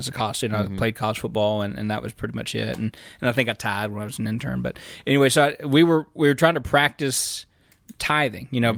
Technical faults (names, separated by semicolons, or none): none